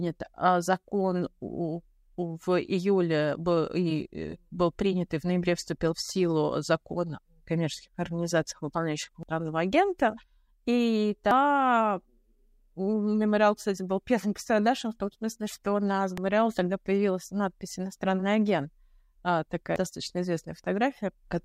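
At 9.23, 11.31, 16.18 and 19.76 s, damaged data in the compressed stream produces brief glitches in the speech. Corrupted bytes make the decoder misread those frames and lose sync until it finds the next valid frame header.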